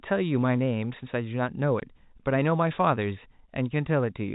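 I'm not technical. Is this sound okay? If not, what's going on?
No, there's one glitch. At about 1.8 seconds the speech drops out for a split second, roughly 20 milliseconds, and you may hear a tiny click. That's packet loss filled with silence. The audio travels in small chunks, one of them went missing, and the receiving end just played nothing in its place. A gap that short suggests a single lost chunk. The phone-line sound throughout comes from G.711 telephone coding, which is normal for calls.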